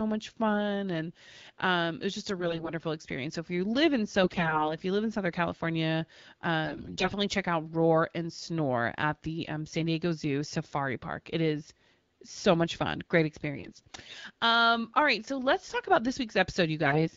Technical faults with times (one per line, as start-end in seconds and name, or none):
2.38-2.70 AMR bit errors
4.22-4.76 AMR bit errors
6.63-7.09 AMR bit errors
13.56-14.16 AMR bit errors
16.86-17.08 AMR bit errors